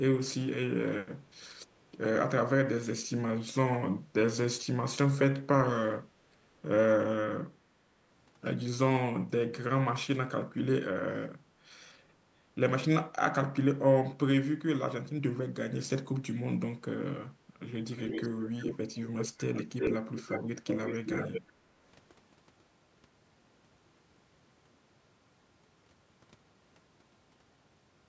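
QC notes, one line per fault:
17.96–21.41 s (bursts at 17.96–18.77, 19.54–19.97, 20.16–20.44, 20.67–21.41), echo leak: a distinct delayed copy of the speech trails it by 0.36 s, from well below the speech to as loud as it. This is likely a loudspeaker's output slipping past an echo canceller. The gap marks it as echo rather than room reverb.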